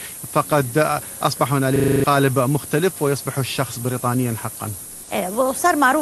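All the way through, you can hear low bit depth with noise shaping: a thin, bright hiss only about 5 dB under the speech, which fits roughly 5-bit audio with its rounding error pushed upward.

From 1.76 to 2.04 s there's a system hang loop, where one 40 ms chunk repeats seven times as a 25 Hz buzz, wiping out around a third of a second.

Then from 4.83 to 5.07 s the room background turns flat and featureless for 240 ms, about 2 dB quieter. That's comfort noise in place of the background, likely from the call codec's discontinuous transmission.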